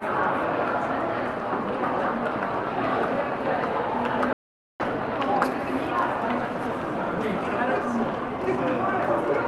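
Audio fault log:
4.33 to 4.80 s, audio dropout to silence: the sound stops abruptly and returns mid-flow after about 0.47 s. The gap is silent with no room tone. The input was likely lost while silence kept being written. The call path's top end stops near 12 kHz.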